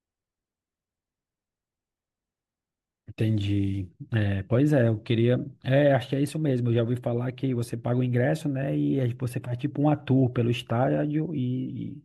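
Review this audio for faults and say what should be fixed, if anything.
Nothing to fix: no audible faults anywhere in the speech.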